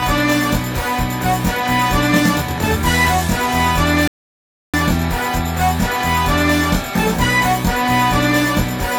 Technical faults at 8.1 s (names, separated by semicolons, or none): channel delay (comb filtering)